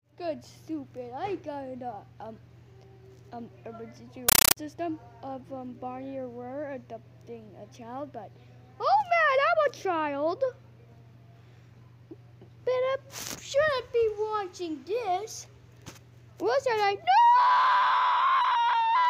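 From 4.29 to 4.57 s the audio is replaced by a compressed stream played as audio: a Dolby Digital (AC-3) bitstream passed as plain samples instead of being decoded. It sounds like very loud, chattering static. Each burst of noise lasts about 9.3 ms and is followed by silent padding, repeating at 31.25 per second, which fits a 448 kbps AC-3 stream. That steady 31 Hz chatter separates it from random digital noise or clipping distortion.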